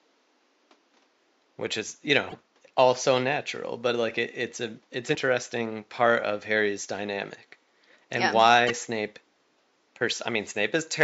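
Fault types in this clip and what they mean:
Damaged data in a compressed stream: some stretches of the coded speech stream were corrupted, so the decoder misread those frames, lost sync and had to search for the next valid frame header before it could resume. Each break is a brief chirp or blip cutting into the speech, at 2.30 to 2.35 s, 5.11 to 5.16 s and 8.67 to 8.71 s. They occur over room noise sitting about 42 dB below the speech.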